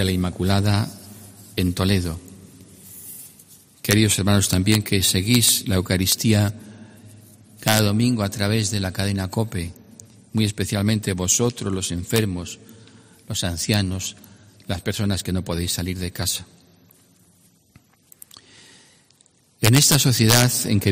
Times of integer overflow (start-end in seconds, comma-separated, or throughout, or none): 3.91-3.93, 4.53-4.75, 5.35-5.49, 6.12, 7.68-7.79, 12.16, 13.74, 19.65-20.43